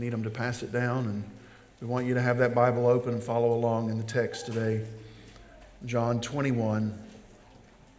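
No technical faults are audible anywhere in the audio.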